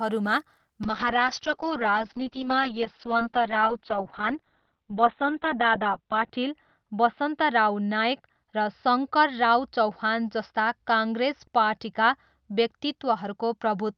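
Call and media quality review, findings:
Call bitrate drop, 0.85 s onward: rough, muffled speech, band cut from 20 kHz to 4 kHz. Bandwidth estimate fell and starved the encoder, consistent with 32 to 7 kbps.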